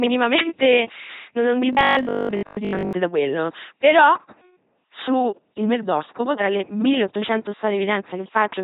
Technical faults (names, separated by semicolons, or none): LPC-10 vocoder; robotic sound from repeated short buffers